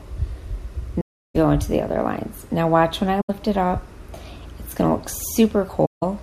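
At 1.01 to 1.36 s, 3.21 to 3.30 s and 5.85 to 6.03 s the sound drops into silence for about 0.34 s, 85 ms and 0.17 s. This is AAC frame loss with muting. Whole coded frames went missing and the decoder zeroed their spectra. The gap lengths point to runs of roughly 16, 4 and 8 frames of about 21 ms each. Because neighbouring windows overlap, each hole fades out and back in rather than cutting abruptly.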